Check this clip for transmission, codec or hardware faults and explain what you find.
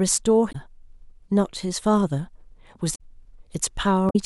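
Damaged data in a compressed stream occurs three times in the speech: 0.49 to 0.55 s, 2.91 to 3.01 s, and 4.06 to 4.16 s. Each burst lasts roughly 70 to 95 ms. At these points part of the compressed data was corrupted. The decoder misreads those frames, loses sync and hunts for the next valid frame header. Each event is heard as a brief chirp, squawk or blip cutting through the speech.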